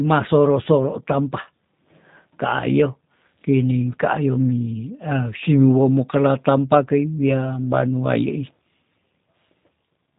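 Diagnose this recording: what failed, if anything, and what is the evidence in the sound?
Codec stage: G.729 codec damage throughout the speech. Nothing passes above 4 kHz, and the rough, synthetic texture from sparse-pulse excitation fits 8 kbit/s coding.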